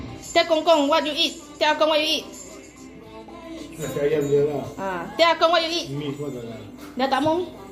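No technical faults are audible.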